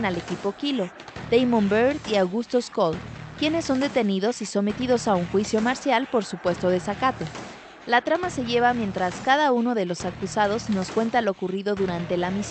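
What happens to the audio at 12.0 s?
Nothing goes wrong at 12.0 s: the audio there is intact, with only the ordinary coding character of the call codec it passed through.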